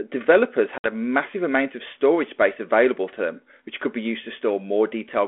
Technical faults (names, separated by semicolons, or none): packet loss on an ADPCM call